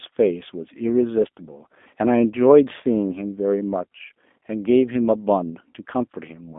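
G.729 codec coding runs throughout this speech clip, leaving sound only between 200 Hz and 3.6 kHz and a rough, synthetic edge, as the voice is rebuilt from a vocal tract filter, pitch predictor and sparse pulses each 10 ms frame, which fits an 8 kbit/s line.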